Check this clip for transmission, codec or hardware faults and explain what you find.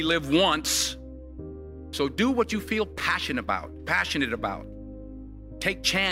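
One fault is present. From 2.98 to 3.02 s the sound briefly jumbles. This is chunks out of order: one 20 ms chunk plays a chunk late, after the chunk that should follow it, leaving three hard joins.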